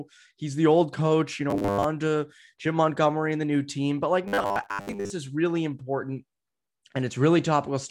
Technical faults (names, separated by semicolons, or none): robotic sound from repeated short buffers